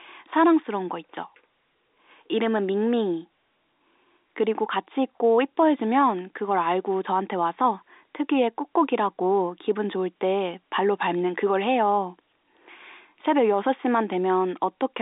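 Nothing in this speech recording stands out as a technical fault. It has passed through G.711 telephone coding, so the sound sits in the telephone band of about 300 Hz to 3.7 kHz, with nothing above 3.8 kHz.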